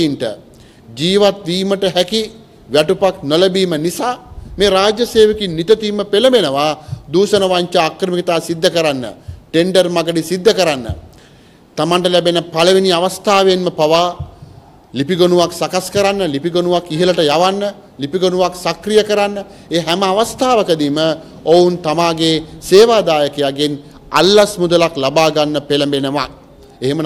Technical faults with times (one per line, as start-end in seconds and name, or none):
0.00-27.05 hard clipping